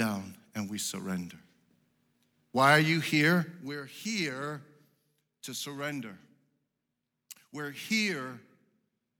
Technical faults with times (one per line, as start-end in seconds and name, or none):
none